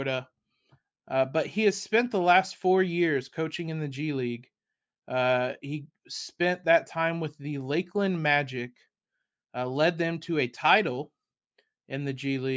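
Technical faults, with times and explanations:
No technical faults can be heard in this speech clip, so there are no times or explanations to give.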